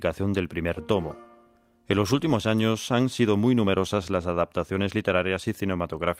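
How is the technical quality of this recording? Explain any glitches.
Nothing here glitches or breaks up, so there's no fault to explain.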